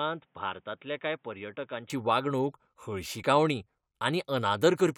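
Speech, opening on what is most likely an input switched to a poorer device: for the first 1.9 seconds the capture seems to come from a lower-grade microphone or a headset call profile before the system moves to its proper input. That stretch stops near 3.8 kHz, so it sounds dull and boxy, sits roughly 5 dB quieter, and carries a faint noise floor well below the signal. At 1.9 s the fuller sound returns abruptly, with no gap at the changeover.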